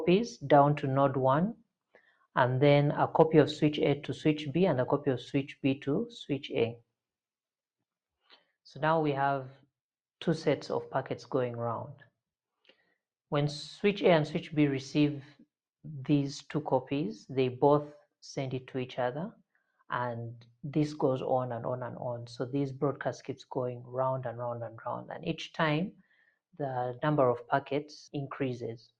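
At 1.94 to 2.36 s the sound sags sharply, dropping by about 14 dB for a few hundred milliseconds, and the same dip returns at 25.92 to 26.29 s, this time by about 13 dB over a slightly shorter stretch. Both are sound cut by the noise suppressor: it mistook steady or trailing material for background noise and pulled its gain down harder than the surrounding audio, briefly hollowing out those passages.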